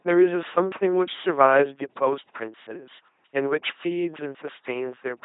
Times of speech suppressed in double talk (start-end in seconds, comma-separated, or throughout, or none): none